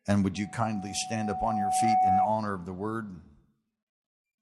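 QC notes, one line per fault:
0.35–2.36 s, loudspeaker feedback squeal: a pure tone near 745 Hz swells over about a second and a half to roughly 10 dB above the sound, because the microphone is re-amplifying its own loudspeaker with loop gain above one at that frequency.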